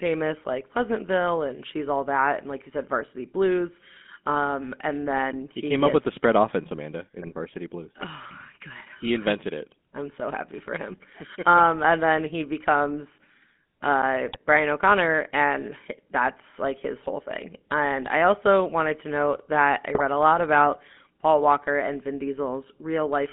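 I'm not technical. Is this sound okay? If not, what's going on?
No. The whole recording went through a GSM full-rate codec, an early mobile-phone system that rebuilds the voice from a rough model and throws away the higher, crisper parts of the sound. That leaves the speech thin, muffled and buzzy, with a gravelly edge throughout.

There are also GSM bit errors, where parts of the phone signal arrived corrupted and the decoder rebuilt the voice wrongly for a moment. You hear brief squawks and gargling at 7.22 to 7.34 s, 14.25 to 14.37 s, and 19.95 to 20.01 s, between "to note that I" and "a lot about".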